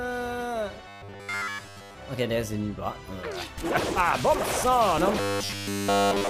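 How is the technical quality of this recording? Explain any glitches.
The recording's technical quality is poor in two places, both robotic sound from repeated short buffers, from 0.88 to 1.95 s and from 5.20 s to the end at 6.29 s. Audio likely arrived too slowly, so playback kept repeating a 10 ms slice while the real audio was skipped. That loop imposes a fixed 100 Hz buzz, turning the sound metallic and rigid. In the first stretch most of the audio is replaced this way. In the final stretch all of it is.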